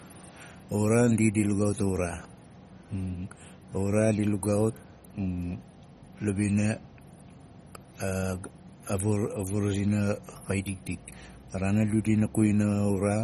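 MP3 compression runs through the whole of this speech clip: nothing comes through above about 13.9 kHz, and the coding damage is plainly audible throughout. The likely cause is an MP3 encoder starved of bits, which fits a rate around 32 kbps. Short of data, it cuts the treble at a fixed point and drops weak frequency components that flicker on and off between frames, giving the audio a watery, swirling texture.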